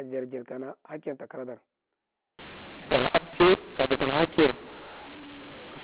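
From 2.39 s to the end, mu-law and A-law are mixed up: the A-law telephone coding is decoded as mu-law, scrambling levels into harsh distortion and noise-filled pauses. The waveform shows distorted peaks, and the spectrogram shows noise in the gaps.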